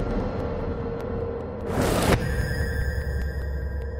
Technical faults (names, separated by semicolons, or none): AAC frame loss with concealment